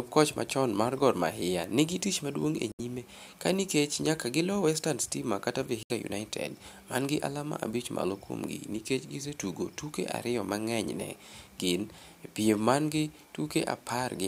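A speech recording with two short holes where the sound just cuts out: one from 2.72 to 2.80 s, between "nigi tich maduong' e" and "nyime ka nikech nyaka", and another from 5.83 to 5.91 s. Each drops about 70 ms of audio, which fits three lost packets. The speech picks back up further along, as if it kept playing underneath. That pattern is most likely a Bluetooth dropout, with packets arriving too late for the headphones to play.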